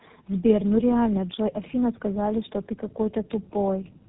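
The speech has tandem speech coding from start to finish. Nothing reaches above 3.8 kHz, so it sounds muffled and narrowband. The voice is also rough and warbly, more than one telephone codec would make it. That points to about three low-rate speech codecs in a row, with the call decoded and encoded again at each link. Each coder adds its own distortion to the damage left by the previous one.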